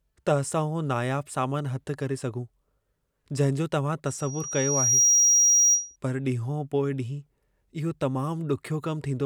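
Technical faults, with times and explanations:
4.06–5.96 s: loudspeaker feedback squeal. A single 5.7 kHz tone swells over roughly a second and settles about 10 dB above the speech, because the microphone is re-amplifying its own loudspeaker. On a spectrogram it is a bright horizontal line at 5.7 kHz that thickens as it builds. In the waveform the envelope widens steadily.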